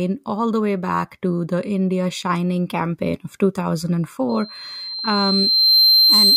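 At 4.29 s a loudspeaker feedback squeal begins and runs to the end. The microphone is hearing its own loudspeaker. At 4.1 kHz the loop gain passes one. A thin tone swells over about a second and a half, ending roughly 10 dB above the speech.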